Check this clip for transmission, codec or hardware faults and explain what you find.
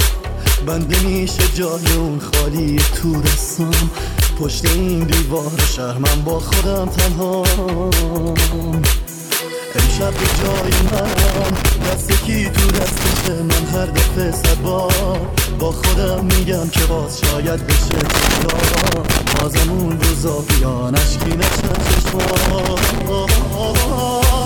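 A hardware fault, loose connector crackle, appears in four bursts: 10.16–11.96 s, 12.69–13.28 s, 17.91–19.43 s and 21.21–23.01 s. A dirty or worn contact making and breaking chops the sound into irregular scratchy crackle. Unlike evenly spaced digital clicks, these bursts are ragged and uneven.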